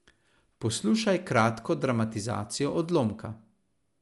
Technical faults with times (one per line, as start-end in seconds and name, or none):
0.00-4.01 Dolby Digital compression